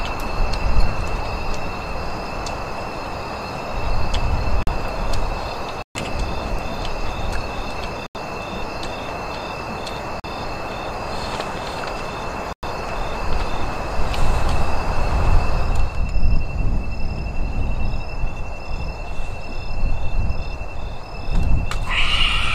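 Five blocks of digital silence cut the audio at 4.63, 5.82, 8.06, 10.20 and 12.53 s. Each lasts 43 to 128 ms and shows as a flat-line hole in the waveform, with the sound cutting out and back with no fade. This fits the output buffer going unfilled, with gaps matching blocks of 2048 and 4096 samples. At 20.39 s, damaged data in the compressed stream briefly disrupts the audio as the decoder loses sync.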